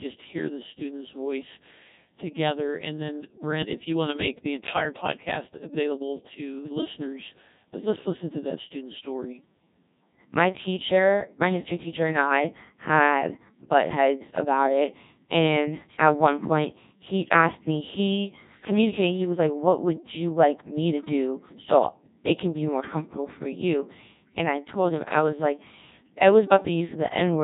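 From start to finish the speech passes through a Codec 2 vocoder, and the damage is heavy. Only pitch, voicing, energy and a coarse spectral envelope survive. The decoder rebuilds everything from sine waves, giving a robotic, buzzy tone at a rate that points to about 1.6 kbit/s. On a spectrogram the harmonics form unnaturally regular combs under a smoothed envelope, and fine noise detail is missing. The waveform's shape bears no sample-level resemblance to the original.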